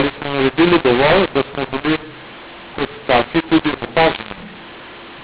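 From start to finish the speech carries a mu-law and A-law mix-up: samples coded as mu-law were decoded as A-law, scrambling levels so the speech turns harsh and the pauses hiss. The waveform looks jagged and uneven, with raised noise in gaps, and broadband grit fills the spectrogram below the 4 kHz telephone ceiling.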